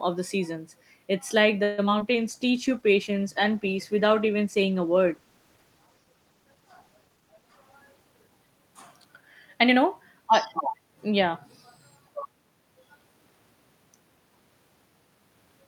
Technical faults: call audio freeze; short concealed packet loss; call bitrate drop; jitter buffer slow-down; jitter buffer speed-up

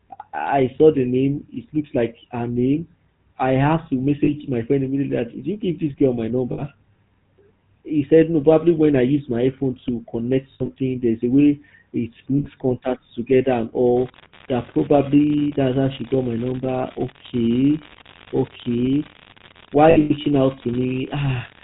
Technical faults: GSM full-rate codec; lost GSM frames

